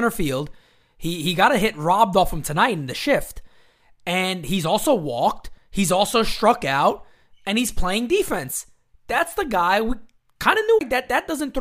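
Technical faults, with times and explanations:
10.79–10.81 s, CD skip: the speech cuts out for a very short mute of around 20 ms, then resumes from a different point, jumping forward or back by a multiple of one disc revolution. A knock or disc flaw threw the laser onto another turn of the spiral. Unlike a plain dropout, where the audio picks up where it stopped, the sound after the gap does not continue from where it broke off.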